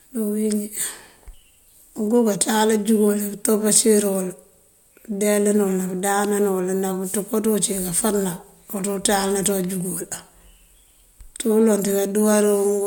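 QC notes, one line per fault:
Nothing stood out on listening to the speech, so there is nothing to log.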